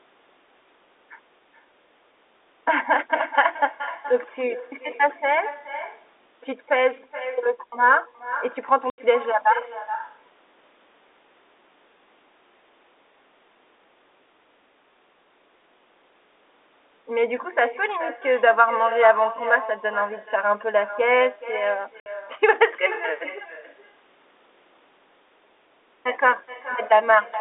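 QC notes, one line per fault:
Throughout: echo with no canceller. The talker's speech returns as a quieter copy about 14 dB down, arriving roughly 0.4 s behind the original. The far end is playing the call through a loudspeaker, and its microphone picks that playback up. Nothing on that side subtracts it, so the sound travels back across the network. The copy sounds thinner than the direct signal because it has passed through a loudspeaker.
8.90 s and 22.00 s: packet loss filled with silence. The audio drops out completely for 80 ms at the first point and 60 ms at the second. Both gaps have abrupt edges. Lost packets were replaced with digital silence rather than concealed. The gap lengths are multiples of 20 ms, which fits 20 ms packets.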